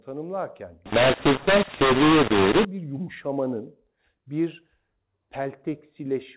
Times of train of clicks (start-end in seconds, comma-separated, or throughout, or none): none